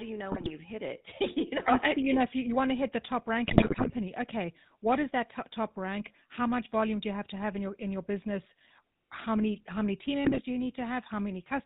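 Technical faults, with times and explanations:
Throughout, GSM full-rate codec: a buzzy, gravelly roughness and nothing above 4 kHz, from pulse-driven vocal-tract modelling, unlike plain band-limiting, which stays smooth.
0.32–0.52 s, 3.48–3.93 s, 10.24–10.42 s, GSM bit errors: after "you know", "to hit the top" and "many how many team", corrupted filter, pitch and gain values produce squawks, pops and gargling, which are bursts rather than steady codec grit.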